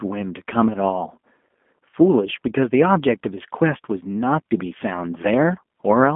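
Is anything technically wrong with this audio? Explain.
Yes. Throughout, the speech sounds thin and slightly rough and synthetic, with nothing above about 3.7 kHz and little below 200 Hz. This is G.729 codec damage: each 10 ms frame is rebuilt from a vocal tract filter, pitch predictor and a few pulses, which fits an 8 kbit/s G.729A telephone link.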